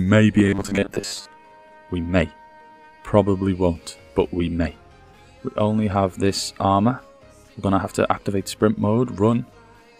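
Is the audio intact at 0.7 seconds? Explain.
No. From 0.36 to 1.28 s there is robotic sound from repeated short buffers. About half the audio is likely replaced by a repeated 10 ms chunk, forcing a rigid, metallic 100 Hz buzz.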